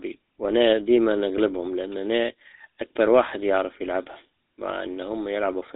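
Speech coded with the GSM full-rate codec from start to finish, with plainly audible damage. Everything above 4 kHz is gone, and the pulse-driven, sparsely sampled excitation gives the voice a buzzy, gravelly roughness throughout, consistent with a 13 kbps telephone coding path.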